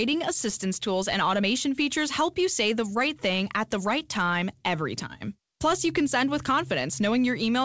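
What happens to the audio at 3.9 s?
Nothing goes wrong at 3.9 s: the speech continues intact, carrying only the band limit of the G.722 call path, which leaves nothing above 8 kHz.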